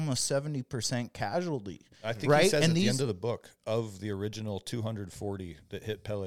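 Nothing technical stands out in this short speech recording; there's no fault to point to anywhere in it.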